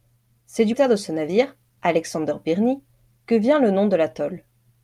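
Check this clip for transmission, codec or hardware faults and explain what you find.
Two transmission faults stand out in this speech clip.

At 0.73 s there is a skip ahead. Roughly 0.4 s of speech was discarded, either lost in transit or dropped when the buffer overflowed with later audio already queued. Playback jumps straight across the missing stretch with no silence or fill, so the speech lurches forward. That hard splice separates it from a dropout, which would leave an audible gap or a muted patch.

From 0.86 s to 2.80 s comes a jitter buffer speed-up. After the buffer had accumulated too much delay, the receiver trimmed many tiny slices of one or a few pitch periods, removing around 0.15 s in total. The speech runs at about 108% speed and sounds rushed, yet its pitch is unchanged. That steady pitch distinguishes it from a clock or resampling error, which would raise the pitch along with the tempo.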